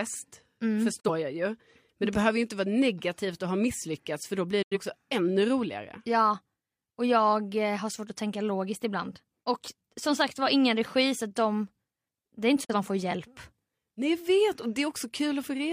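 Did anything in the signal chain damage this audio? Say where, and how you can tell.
Yes. The speech fades out over about 8 ms into silence at 1.00–1.10 s before "jag ju", 4.62–4.77 s after "misslyckats för då blir", and 12.64–12.75 s before "man får hjälp". This digital broadcast dropout points to reception: the receiver muted one or two failed frames, discarding their audio.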